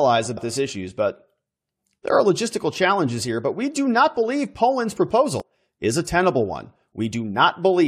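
Damaged data in the compressed stream of this speech recording throws the decoder out of sync, giving a short glitch at 0.36 s before "this issues" and at 5.40–5.42 s before "is a tenable".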